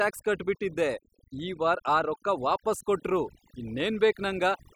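Overdone noise removal runs through the whole clip. A noise reduction stage set far too aggressively pulls individual frequency bands down whenever they sit near its noise estimate, taking the quieter parts of the voice with them. Pauses fall to near silence flecked with twinkling specks.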